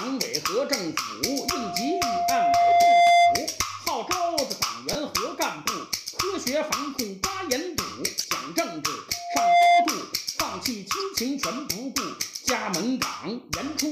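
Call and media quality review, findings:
Pure tone near 697 Hz swelling into a squeal, 1.24–3.51 s, building over roughly two seconds to about 15 dB above the programme sound. Loudspeaker feedback squeal: mic hears its own speaker, loop gain above unity at 697 Hz. Recurs 9.13–9.94 s, same pitch, faster onset (under half a second), same level. Suspect acoustic coupling at the playback endpoint.

Short chirp/blip, 4.93–4.95 s, peaking around -15 dBFS, likely spanning a couple of codec frames. Corrupt frame decoded: damaged bitstream played anyway, energy sprayed into wrong bands. Second, louder burst 8.19–8.26 s, around -10 dBFS, roughly three frames long. Check transport error detection/concealment.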